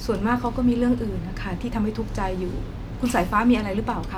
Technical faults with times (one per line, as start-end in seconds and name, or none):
none